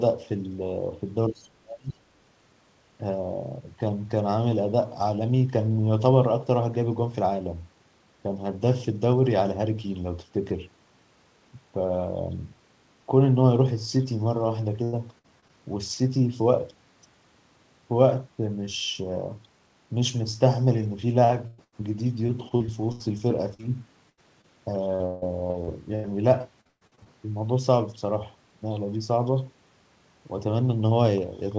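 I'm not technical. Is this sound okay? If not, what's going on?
No. From 1.29 to 2.03 s the voice dips sharply and partly cuts out. This is likely speech suppressed in double talk, with both sides talking at once.

From 1.34 to 1.48 s a faint second voice slips in. That is likely the other side's voice leaking through from a loudspeaker.

From 14.84 to 15.51 s, and again from 21.25 to 27.08 s, the sound turns choppy and robotic. This is repeated packet loss. Small pieces keep going missing and get patched over.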